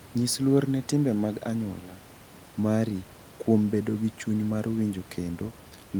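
Right from the start and running the whole way through, there's USB whine: a steady, fixed-pitch tone based on 1 kHz, with its strongest component up at the third harmonic, 3 kHz. That points to the bus's 1 ms frame timing leaking current ripple into the audio through power or ground. It sits roughly 40 dB below the speech, thin and constant, below the room noise, which sits about 24 dB under the speech.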